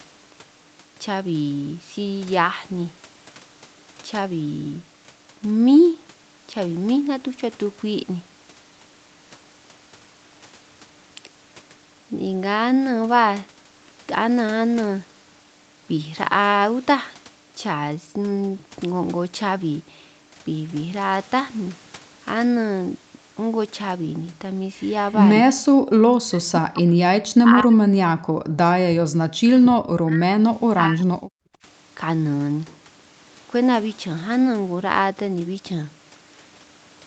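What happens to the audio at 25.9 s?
The echo canceller clamps the microphone while the loudspeaker plays, so the background is gated by the echo canceller from 25.79 to 25.91 s. Room sound drops by up to about 35 dB for roughly a tenth of a second, returning once the canceller releases.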